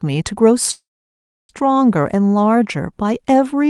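At 0.71 s the speech breaks into a short fading buzz, then near-silence until 1.51 s: a call audio freeze, likely from delayed packets draining the jitter buffer. Waveform and spectrogram show about 0.67 s blank, then speech resumes intact, about 0.78 s later.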